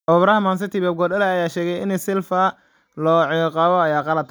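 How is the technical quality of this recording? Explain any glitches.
The technical quality of the recording is sound, with no glitches to explain.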